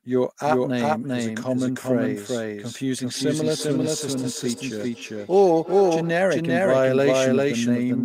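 From start to finish the speech carries a second, identical copy trailing roughly 0.4 s behind, at about the same loudness as the original, so every syllable lands twice with no fade or room colour on the repeat. This is a doubled audio track, likely produced when the same signal reaches the mix twice, once directly and once through a slower route, or when an edit leaves two copies misaligned by that fixed offset.

Between 3.07 and 6.19 s a separate echo appears on top of that: words return at an interval of around 0.3 s, each pass thinner and more ringing than the last, peaking at about 13 dB below the speech before stopping. That is feedback echo between two devices, where one device's loudspeaker output is picked up by the other's microphone and sent back round, and neither echo canceller removes sound it did not play itself.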